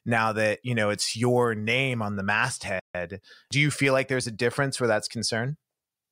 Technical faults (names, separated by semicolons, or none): playback stall